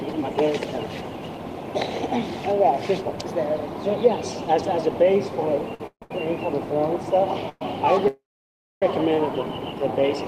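The audio runs with repeated late-packet trouble in its second half. A short stall from a late packet appears at 5.74 to 5.81 s and again at 6.03 to 6.11 s. Each time the receiver's jitter buffer ran dry and it held the last sound for about 53 ms and then 77 ms, continuing from the same point once the data arrived, so nothing is lost but a sound is drawn out with a faint buzz. On a spectrogram these look like brief horizontal smears where the harmonics freeze in place. Call audio freezes come at 5.87 to 6.03 s, 7.49 to 7.62 s and, longest, 8.08 to 8.83 s. Each one begins as a held, buzzy continuation that decays, then goes quiet for about 80 ms, 30 ms and 610 ms respectively, before the audio resumes where it stopped. The likely cause is packets delayed in transit, which leaves gaps of about 149 ms, 114 ms and 739 ms inserted into the timeline. In the waveform each shows as a fading tail dropping to a flat line, with the last a clearly visible hole. 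Finally, a jitter buffer slow-down runs from 9.72 to 10.16 s. The receiver repeated single pitch periods and pause fragments to rebuild its reserve, adding about 40 ms and playing at 93% speed with unchanged pitch. Sounds are slightly stretched. On a spectrogram this shows as elongated features.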